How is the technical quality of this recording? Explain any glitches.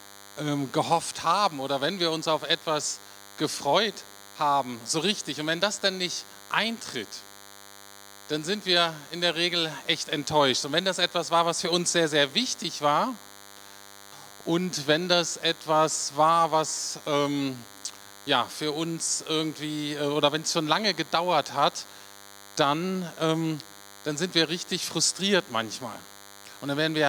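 The recording carries one persistent fault: a DECT cordless phone buzz that runs through the entire clip. It sits at a steady 100 Hz repetition rate, roughly 20 dB below the main sound, and is thin and raspy rather than smooth. A nearby DECT handset or base pulses its radio transmitter every 10 ms, and the audio circuitry rectifies those bursts into a harmonic-rich buzz. Unlike mains hum at 50 or 60 Hz, this has a gated, edgy character.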